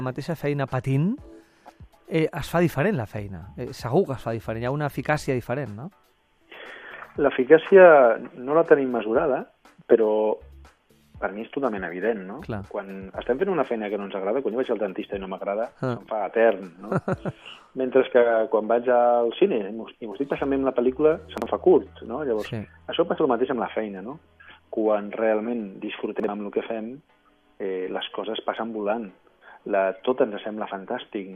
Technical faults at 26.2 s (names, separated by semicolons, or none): chunks out of order